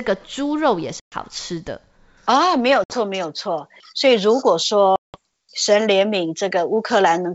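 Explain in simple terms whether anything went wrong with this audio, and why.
Packet loss on an ADPCM call: pieces of the stream never arrived, leaving sudden silent holes at 1.00, 2.84 and 4.96 seconds, each about 0.12, 0.06 and 0.18 s long. The decoder then briefly loses its footing, so the speech returns slightly off before settling.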